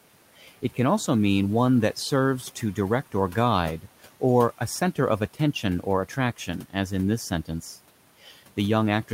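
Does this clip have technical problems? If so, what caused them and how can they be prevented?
Yes. Near the end, from 8.24 to 8.36 s, there is speech cut by the noise suppressor. The suppressor misjudged a quiet stretch of speech as background and applied its gain reduction to it, pulling the level down by as much as about 8 dB for roughly a tenth of a second. The sound there turns faint and swallowed, while the room noise sits about 23 dB below the speech. To prevent it, make the suppressor less aggressive or give it a slower release so low-level speech is not gated along with the background.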